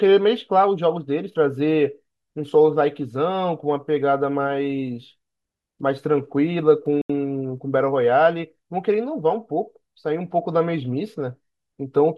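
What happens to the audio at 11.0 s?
At 11.0 s the audio carries on intact, with no dropout, click, distortion or other fault at that point.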